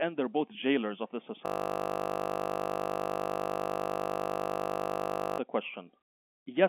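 Right after "both jailers of the", at 1.46 s, the speech locks into a system hang loop that lasts until 5.38 s. The playback device kept recycling one 20 ms slice of its ring buffer after the system stalled, repeating it roughly 200 times. The result is a steady 50 Hz buzz. On a waveform it appears as one identical 20 ms cycle tiled end to end. On a spectrogram it shows as flat horizontal lines at 50 Hz and its harmonics, confined below about 3.7 kHz by the telephone-band coding.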